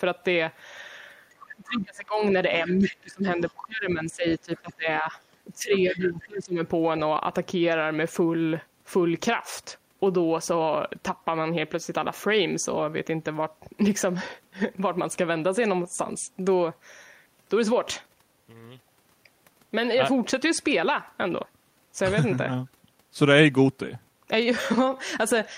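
A speech recording in which an echo canceller likely failed to remove the loudspeaker signal, so the other side's voice is leaking through at 1.3–1.8, 2.67–2.97, 3.47–3.53, 4.56–4.74 and 5.74–6.24 s, heard as scraps roughly 10 to 30 dB under the talker. During double talk the canceller likely also turned down the talker, so speech is suppressed in double talk at 1.52–2.21, 2.65–5.14 and 5.55–6.59 s, dipping by around 20 to 25 dB.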